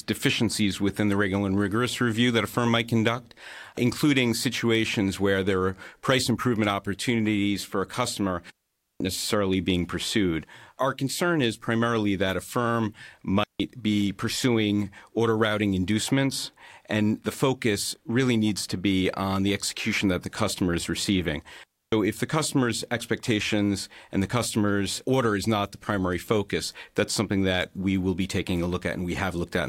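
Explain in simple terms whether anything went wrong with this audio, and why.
Digital wireless dropout at 8.50 s (after "opportunities for a customer"), 13.44 s (after "primarily that a firm") and 21.64 s (after "the customer is receiving"). Each time, the wireless link lost too much data, so the receiver muted. That left clean silent gaps of about half a second, 0.16 s and 0.29 s, with no noise around them.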